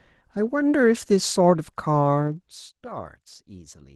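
From start to finish the speech carries Opus voice compression with plainly audible damage: a muffled, slightly hoarse and faintly robotic quality that points to a low bitrate, roughly 16 kbps. The coder runs in hybrid mode, with linear prediction below 8 kHz and a coarser transform layer above it up to full band. On a spectrogram the region above 8 kHz looks patchy and smeared, with energy blocks that fit 20 ms frames, and harmonics below look slightly blurred.

From 2.23 s to 2.69 s the level drops by about 15 dB as zipper noise. The drop happens in steps of about 1 dB, at roughly twenty per second, with no smoothing between them, so each jump leaves a tiny click. The clicks form a fine ticking or zipping that rides on the speech while the fade runs. On a waveform the envelope falls as a staircase rather than a slope, and a spectrogram shows faint vertical broadband lines at each step.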